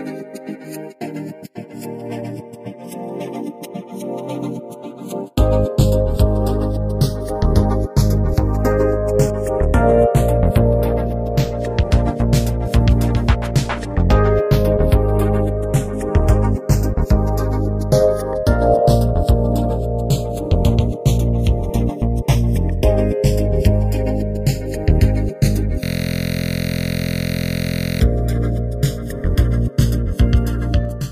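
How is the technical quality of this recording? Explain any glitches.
Two faults are audible: a slow drift between the stereo channels that runs through the whole recording, and a hard repeating loop near the end.

Channels drifting apart, throughout: the two channels appear to run on separate clocks, mismatched by around 40 ppm, so the time offset between them keeps growing, reaching somewhat under a millisecond by the end. When the channels are combined or heard together, the resulting comb-filter notches move gradually across the spectrum, giving a slow, swirling flanger-like colouration that shifts over the length of the recording.

System hang loop, 25.84 s to 28.01 s: for just over two seconds the playback or capture path stalled while the audio hardware kept reading the same buffer. A single 23.22 ms slice repeats back to back, about 93 times, which fits a 1024-sample buffer. At a 43.1 Hz repeat rate the result is a steady, pitched buzz rather than a stutter, replacing the sound for that stretch until the system recovers.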